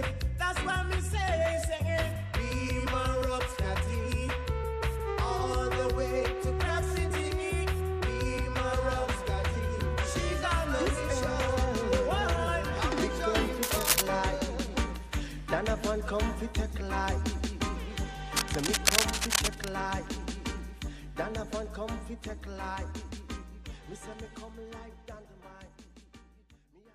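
At 13.63 to 14.02 s, then 18.36 to 19.69 s, cable scratch noise: dense, uneven rustling, first louder than the sound, then level with it, likely from a worn connector shifting. Unlike steady hiss or isolated clicks, it comes in ragged bursts.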